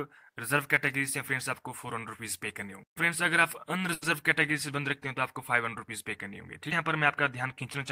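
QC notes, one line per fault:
3.93–4.04 s, short stall from a late packet: the jitter buffer ran dry, so the last sound was stretched for about 90 ms until the packet arrived, then resumed with nothing lost but 90 ms later. It is heard as a brief held sound with a slight buzz or dip. On a spectrogram this shows as smeared horizontal bands, and the waveform shows a repeated, flattened stretch.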